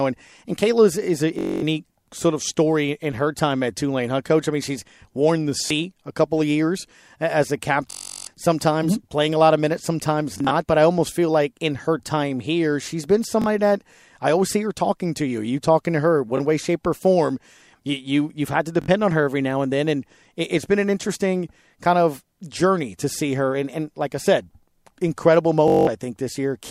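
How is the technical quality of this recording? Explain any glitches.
The speech is marred by repeated Bluetooth stutter at 1.39–1.62, 5.66–5.71, 7.91–8.27, 10.34–10.51 (scattered), 13.42–13.46, 16.37–16.40, 18.82–18.88 and 25.68–25.87 s. Late or lost packets make the receiver loop a roughly 21 ms slice, which is heard as a buzzing, machine-gun repeat lasting up to 363 ms, before the speech jumps ahead.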